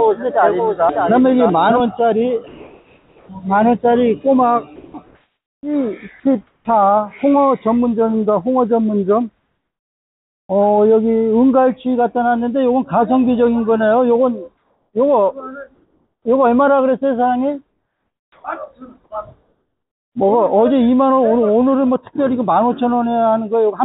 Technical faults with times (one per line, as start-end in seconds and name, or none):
0.00-1.80 doubled audio track
2.48-3.29 comfort noise in place of the background
4.76-4.94 sound dropped by the voice detector
5.06-5.63 comfort noise in place of the background
6.47-6.65 comfort noise in place of the background
14.57-14.93 comfort noise in place of the background
15.74-16.25 comfort noise in place of the background
17.69-18.44 comfort noise in place of the background